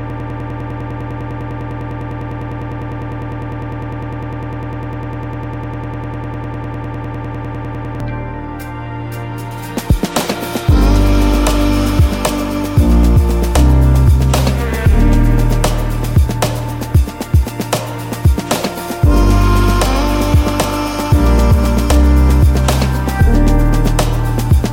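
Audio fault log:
0.0–8.0 s broken-record loop. Already running at the start, a 0.1 s fragment repeats about 80 times. A stall likely resent it, so the audio underneath is lost.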